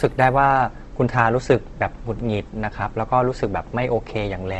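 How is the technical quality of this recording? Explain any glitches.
The recording is audibly degraded throughout by Opus compression. The likely cause is an Opus encoder in its music-oriented CELT mode running short of bits, consistent with a low rate around 16 kbps. When too few bits are available, the encoder preserves each band's overall energy but fills in the fine detail with folded copies of lower bands or with noise. The speech therefore comes across as rough, grainy and noisy, and the upper range is cut off, with nothing above about 12.1 kHz.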